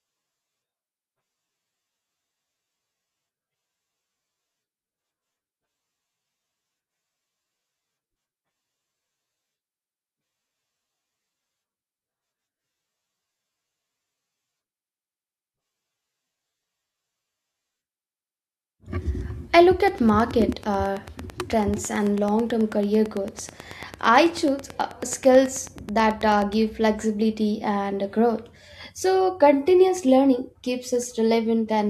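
Right after "I look", at 19.88 s, a train of clicks starts up and runs until 26.54 s, clearing just before "flexibility and growth". It's a steady ticking at about 9.2 clicks per second, evenly spaced, roughly seventy pulses all told, each with much the same shape and poking a few dB above the speech, so you hear it through the pauses too. The likely cause is interference from nearby equipment or a faulty connection or power supply injecting a pulse at a fixed rate.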